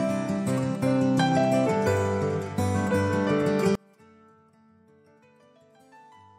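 From 3.75 s to the end of the clip, the sound drops by about 34 dB. It does not fade; it collapses at once. What remains is faint. The likely cause is one channel inverted. One stereo channel has flipped polarity. When the two channels are summed to mono, everything they share cancels out. Only the small difference between them survives, which is why the level falls so sharply.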